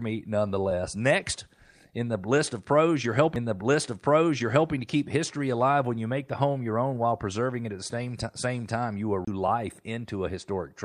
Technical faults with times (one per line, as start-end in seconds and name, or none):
3.36 CD skip
9.25-9.27 CD skip